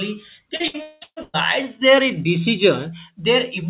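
Faint regular ticks, about every third of a second, run from 0.23 s to the end: clock slip clicks, likely from two unsynchronised clocks drifting around 70 ppm apart, dropping or repeating single samples. From 0.56 to 1.36 s the speech turns choppy and robotic. This is repeated packet loss: six holes, the longest about 0.2 s, are patched by stretching the preceding sound over roughly 70% of that stretch. The audio stops at 4 kHz throughout, which fits a narrowband call codec such as G.711.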